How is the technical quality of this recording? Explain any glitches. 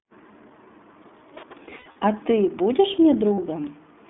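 The recording is narrowband and codec-coloured throughout, with two patches of lost audio.

The iLBC codec runs the whole way through, which fits its 15.2 kbps, 20 ms frame mode. Sound is confined to 200 Hz to 3.5 kHz and has a rough, synthetic edge, which sets it apart from a simple low-pass.

Lost iLBC frames occur from 1.66 to 2.04 s, with about 180 ms missing across 360 ms in runs of up to about 70 ms, and again at 3.34 to 3.40 s, about 40 ms. In each gap the decoder repeats the last pitch cycle with noise, so you hear a held, buzzy vowel rather than silence. The voice then recovers almost at once.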